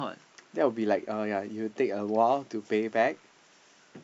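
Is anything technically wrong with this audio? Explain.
No, nothing is technically wrong with this audio.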